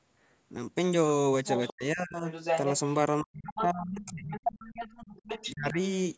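From 1.46 to 1.73 s a second, fainter voice sits under the speech at about 15 dB down. This is the other side's voice leaking through, most likely far-end audio from the talker's loudspeaker that the echo canceller left in the microphone signal. Later leaks come at 2.3–2.79 s at roughly equal level with the speech, at 3.46–3.62 s about 5 dB down, briefly at 4.04–4.11 s about 25 dB down, and from 4.31 to 5.51 s about 10 dB down. On a spectrogram these look like a second, unrelated set of harmonic stripes overlapping the talker's.

Speech suppressed in double talk follows at 1.7–2.28 s, again at 3.22–4.38 s, and at 5.51–5.78 s. The talker's level drops by up to about 30 to 35 dB in pieces, roughly half a second in the first stretch, about a second in the second and a fifth of a second in the last. The likely cause is the canceller turning everything down while both sides overlap. The waveform shows sudden hollowed-out envelope gaps, and the spectrogram shows dark vertical bands.

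The call's microphone processing leaves no energy above 8 kHz.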